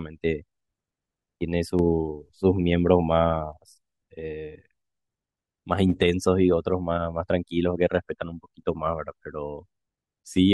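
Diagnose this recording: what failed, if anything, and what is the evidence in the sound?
At 1.79 s the speech and the background noise step up together by about 4 dB with no fade. They hold at that level until 3.53 s, then drop straight back. Because the noise floor moves in lockstep with the speech, the change sits in the signal path rather than in the talker. This is a sudden gain jump, likely from a digital gain setting in the call processing or driver stage applied instantly, without a ramp.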